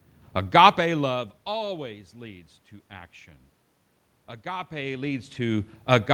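Nothing stood out on listening; the background room noise and the changes in level around 0.5 s and 4.5 s, where the talker shifts relative to the microphone, belong to the recording itself.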